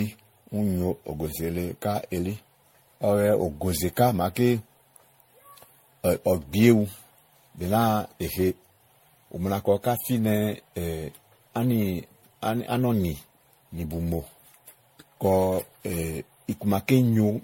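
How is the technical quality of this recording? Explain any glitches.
The technical quality is compromised by one fault that runs through the whole clip. Generation loss affects the speech from start to finish: a swirly, hollow, smeared texture with blurred consonant attacks, and nothing above 16.5 kHz. This likely comes from around seven successive MP3 encodes, consistent with roughly 64 kbit/s, each requantising on a shifted frame grid so that noise and spectral holes accumulate.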